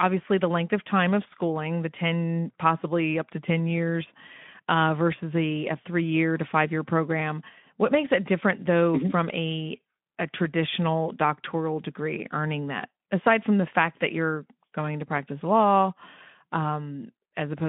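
Nothing in this speech clip stands out as a technical fault. It has the narrow telephone-style band of a Speex link, running from about 150 Hz to 3.5 kHz, with only the light coding texture that fits a rate around 15 kbps.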